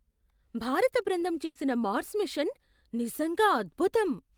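At 1.45 s, just after "భారత బృందం", a burst of packet loss cuts into the speech until 1.57 s. Roughly 100 ms of audio never arrived in time, and the receiver covered the hole by extending the last received sound and fading it down, which comes across as a brief held buzz or hiss rather than silence. The speech then picks up at "మార్స్ మిషన్", with the missing stretch simply skipped over.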